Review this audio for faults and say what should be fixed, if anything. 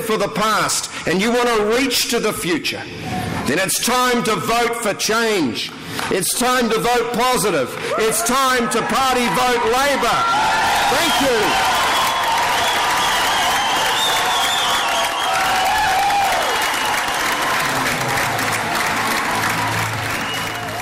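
Two brief smeared, noisy blips break the sound, at 15.98 s and from 17.58 to 17.60 s: tonal content momentarily turns to a hissy wash before recovering. These are lost LE Audio frames. The LC3 decoder filled each gap by repeating the last spectrum with random signs, about 10 ms at the first point and 20 ms at the second, which fits one and then two missing 10 ms frames. To prevent this, strengthen the Bluetooth link with a shorter range, less 2.4 GHz interference, or more retransmission headroom.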